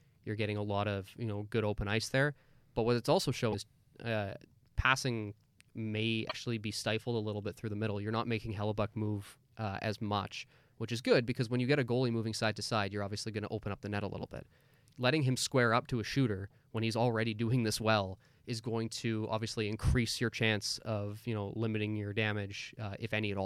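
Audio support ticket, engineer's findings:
Short glitches at 3.52–3.55 s, between "what it's also" and "uh passing may", and 6.28–6.34 s, before "be stifled a little", with the audio skipping forward. Likely broken MP3 bit reservoir: frames dropped, successors decoding borrowed bits from the wrong frame. Lengths fit about one to two 26.1 ms MP3 frames.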